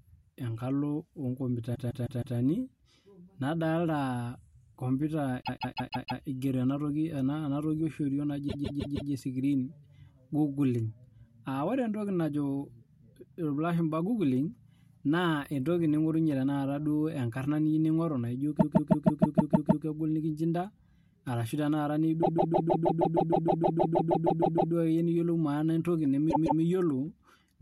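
Repeated frames stutter the speech at 1.74–2.37 s, 5.42–6.21 s (just before "ena toki"), 8.48–9.11 s, 18.59–19.84 s, 22.22–24.73 s and 26.29–26.61 s. A 156.7 ms block of compressed audio, which fits six codec frames, was written again and again. The decoder replays that same fragment from two to sixteen extra times, so the sound loops audibly and the clip runs longer by up to about 2.5 s per event.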